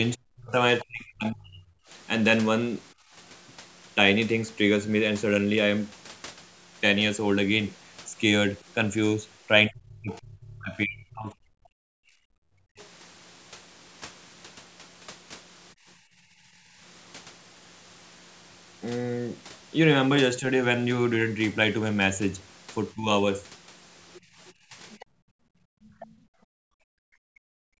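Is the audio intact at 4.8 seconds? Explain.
Yes, at 4.8 seconds the speech is intact, carrying only the normal call microphone processing, with its trimmed lowest bass and nothing above 8 kHz.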